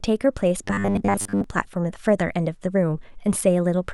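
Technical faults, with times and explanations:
0.64–1.44 s, robotic sound from repeated short buffers: for this stretch the speech becomes a rigid, metallic buzz at 100 Hz, though it still loosely follows the words. The likely cause is audio arriving too slowly, so the playback fills the gaps by looping the last 10 ms chunk. Because most of the segment is these repeats, the real audio is skipped and the loop rate imposes its own fixed pitch.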